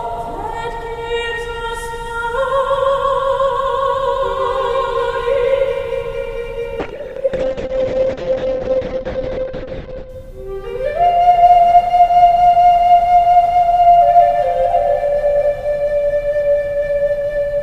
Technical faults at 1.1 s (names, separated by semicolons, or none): none